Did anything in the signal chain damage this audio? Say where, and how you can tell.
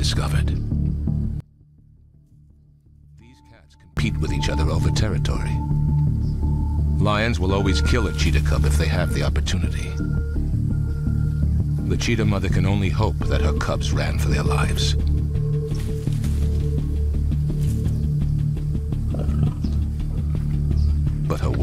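Yes. From 1.40 to 3.97 s the sound, background and all, drops by about 30 dB and then snaps back. That pattern points to one channel inverted, likely a polarity flip in the analogue wiring upstream of the mono fold-down. With one leg reversed, everything common to both channels cancels when they're summed, so what's left during that stretch is just the small mismatch between left and right.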